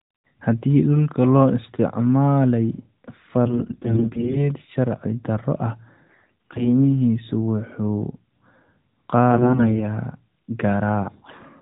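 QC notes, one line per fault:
3.46–4.49 s, 6.08–6.71 s, 9.32–9.83 s, 11.28–11.42 s, AMR bit errors: scratchy, gargly bursts, the first two either side of "sharci darro ah". Flipped low-priority frame bits misplace excitation pulses, though pitch and level roughly hold.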